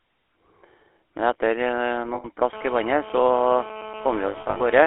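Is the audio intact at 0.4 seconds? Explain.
No. At 0.4 s the speech carries the GSM full-rate codec, which runs through the whole clip. It models the vocal tract and excites it with regular pulses built from every third sample, giving a plainly buzzy, gravelly texture. The band is limited to about 300 Hz to 3.4 kHz, which fits a 13 kbps GSM line.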